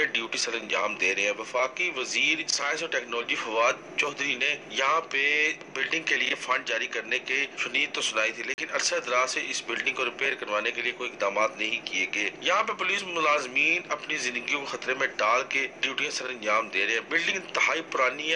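At 8.54 s the sound drops out abruptly for about 40 ms and returns: a short hole in the audio. It is a block of digital silence, where samples were replaced by zeros, probably because the output buffer wasn't filled in time.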